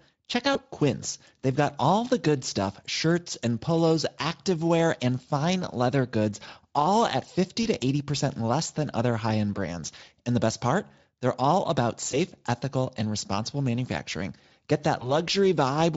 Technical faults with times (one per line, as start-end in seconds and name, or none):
0.53-0.58 VoIP packet loss concealed by the speech codec
7.63-7.67 VoIP packet loss concealed by the speech codec
12.11-12.19 VoIP packet loss concealed by the speech codec
14.99-15.13 VoIP packet loss concealed by the speech codec